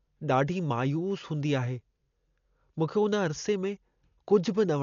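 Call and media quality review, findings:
Dolby Digital compression, likely, throughout the speech. Dull, band-limited sound, nothing above 6.9 kHz; heavy codec damage, rough fluttering noise around voiced tones. Mechanism: starved encoder narrows the band, leaves many frequency lines without mantissa bits; decoder fills them with dither noise. Damage level fits a low bitrate near 48 kbps.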